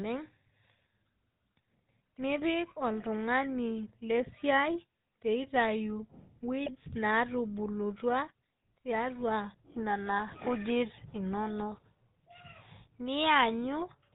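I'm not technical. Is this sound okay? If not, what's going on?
No. The whole recording has the sound of the GSM full-rate codec, the compression used by early mobile phones. It rebuilds the voice from a simple model of the throat and mouth driven by a stream of pulses, so the speech comes out buzzy and gravelly, and nothing above about 4 kHz survives. It differs from ordinary muffling because the roughness is in the voice itself, not just a loss of brightness.

There are also two brief bursts of GSM bit errors, from 6.63 to 6.70 s and from 10.28 to 10.38 s. In each, damaged data reached the decoder, so a few tiny slices of speech were rebuilt with the wrong tone or loudness. The voice suddenly squawks, pops or gargles for a fraction of a second. Unlike a dropout, the sound doesn't go silent: it turns briefly strange and then recovers.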